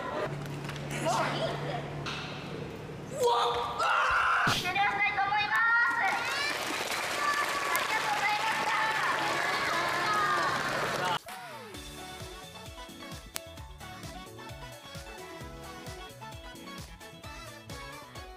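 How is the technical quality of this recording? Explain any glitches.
The recording has one kind of glitch, bit error spikes, heard as five isolated ticks at 0.91, 3.24, 5.56, 7.76 and 13.36 s. A flipped bit throws one to three samples off by a power of two, then they snap back. Each tick is sharp, broadband and unrelated to the sound. The loudest, at 7.76 and 13.36 s, reach about -6 dBFS.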